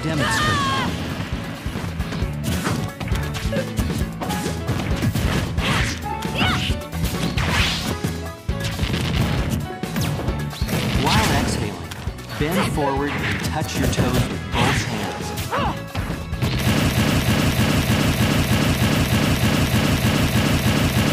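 From 16.89 s to the end, the audio sticks in a broken-record loop: one fragment of about 0.31 s repeats exactly, back to back, some fourteen times, and whatever should have followed never plays. The likely cause is a player, encoder or stream stalling and resending its last buffered piece.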